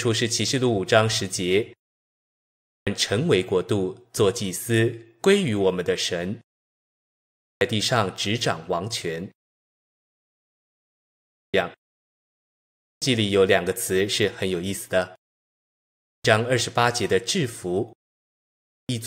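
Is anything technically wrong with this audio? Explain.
Yes. There is a clipped start after a pause at 2.25, 6.97, 10.97, 12.44, 15.66 and 18.34 s. After each silence of 0.47 to 1.69 s, the output device has dropped into a sleep state and takes 0.55 to 0.64 s to wake. That swallows the opening of the speech, so each phrase bursts in abruptly, missing its first sounds. The muting of the pauses themselves is ordinary power-saving behaviour and costs no speech.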